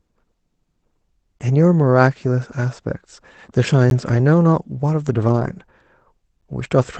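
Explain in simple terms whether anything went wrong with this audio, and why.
Two kinds of fault can be heard in this speech.

The first is a gap between chunks: tiny holes of silence, each about 12 ms, at 1.39, 3.90 and 6.41 s. They arrive every 2.5 s, so the sound was delivered in pieces and a short silence sat at each join. No speech goes missing.

The second is a lost packet rebuilt from error correction, from 5.28 to 5.62 s. There is no gap here. Instead, the audio turns rougher and noisier for a moment, because the receiver filled in the missing bits from a lower-quality backup copy sent along with the call.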